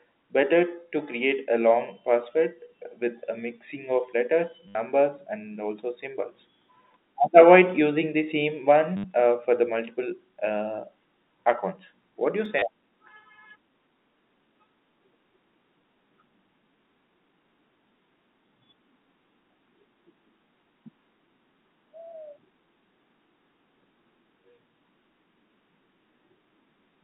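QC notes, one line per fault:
4.68–4.75 s, 8.97–9.04 s, 12.59–12.62 s: packet loss with last packet repeated. The receiver replays its last packet to fill each gap of 70, 70 and 30 ms. The loops don't line up with the pitch, and the run gives a brief robotic stutter buzzing near 100 Hz, which fits 10 ms packets.
12.45 s: underrun with held sample. The output holds its last value flat for 0.73 ms before data resumes. Well under a millisecond of the 200 Hz–3.7 kHz telephone-band audio is lost.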